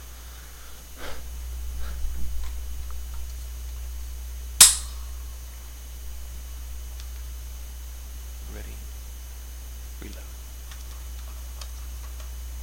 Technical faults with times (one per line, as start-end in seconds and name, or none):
none